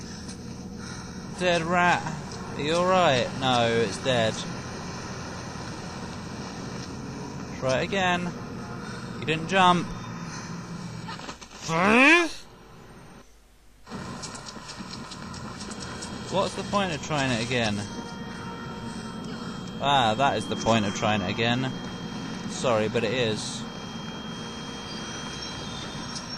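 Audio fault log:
15.61 s to the end, 26.38 s: feedback whistle. A thin, steady tone at 3.2 kHz appears behind the sound and holds to the end of the clip. It sits around 20 dB below the main sound and swells and fades slowly in level. The likely cause is a loudspeaker feeding back into the microphone, with the loop gain sitting just at the edge of feedback. One frequency keeps ringing without building into a howl.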